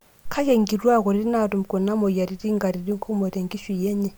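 No technical faults are audible in this speech recording.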